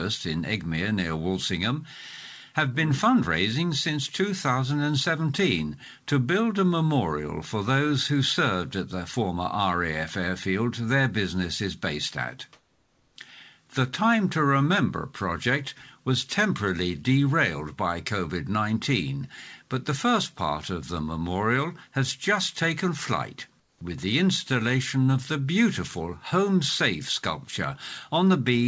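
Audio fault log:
12.53 to 13.16 s and 23.60 to 23.81 s, comfort noise in place of the background: During two pauses, lasting 630 ms and 210 ms, the quiet background, about 42 dB below the loudest sound, turns into a flat, steady hiss with no detail. The first stays at the same level. The second drops by about 6 dB. The likely cause is discontinuous transmission. The sender goes silent, and the receiver fills the gap with synthetic noise roughly matched to the background.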